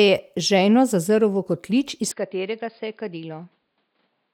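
Speech clip; from 2.1 s, just after "zazrl v kotlič iz", it turns dull, band-limited below 5 kHz, roughly 10 dB quieter with faint new noise, likely an input switched to a poorer device.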